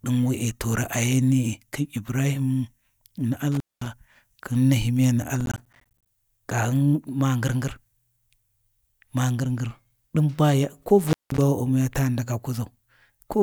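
At 3.52 to 3.87 s and again at 11.04 to 11.41 s, an intermittent contact opens the line for about 213 ms and then about 190 ms. The speech drops out between crackling edges, which look like vertical broadband spikes framing near-empty gaps on the spectrogram. From 5.41 to 6.07 s, processor overload crackle tears through the speech. Around thirty missed deadlines each leave hard-edged silent slivers, which fits a buffer of about 10 ms, and these appear as dense vertical streaks.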